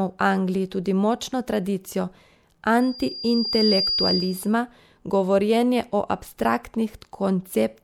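From 2.80 s to 4.55 s a loudspeaker feedback squeal sets in at 4.8 kHz, where the microphone-to-loudspeaker loop gain exceeds one. The tone builds over about a second to roughly the speech's level, a single bright horizontal line on a spectrogram and a swelling waveform envelope.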